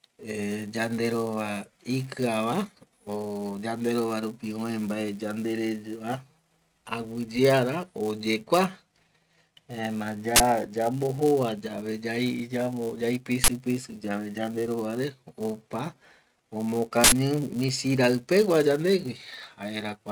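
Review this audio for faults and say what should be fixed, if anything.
A steady buzz at 172 Hz runs under the speech for the whole clip, the sign of a filter restarted on every block. The filter drops its stored state at each block boundary and starts again from silence, so every block opens with a small transient. The rate fits a 256-sample block. On a spectrogram it shows as a comb of horizontal lines at 172 Hz and its harmonics, brighter where the speech is louder; a zoomed waveform shows evenly spaced ticks. Carrying the filter state across blocks instead of resetting it would remove the buzz.

Three short bursts of digital noise, at 10.36 to 10.40 s, 13.44 to 13.48 s and 17.04 to 17.12 s, come from an uninitialised buffer: blocks were played before audio had been written into them, so leftover memory came out as samples. The first two last 40 ms and the third 80 ms. The waveform shows abrupt blocks of noise, and the spectrogram shows broadband vertical bands covering the whole frequency range. 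Zero-filling buffers on allocation and playing only blocks that have been completely written would prevent these bursts.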